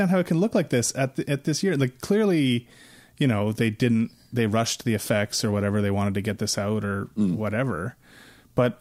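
Nothing here stands out as a technical fault; the speech runs along without any glitch worth flagging.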